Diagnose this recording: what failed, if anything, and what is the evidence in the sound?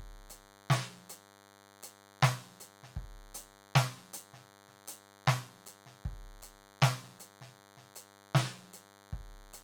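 DECT cordless phone buzz has got into the analogue wiring. A thin, rasping 100 Hz buzz with a dense stack of harmonics runs under the music for the whole clip, sitting roughly 25 dB below it and never changing with the playing. A nearby DECT handset or base fires a radio burst every 10 ms, and the audio circuit rectifies it into a pulse train. Mains hum would be smoother and centred on 50 or 60 Hz. This buzz is spiky and strictly 100 Hz.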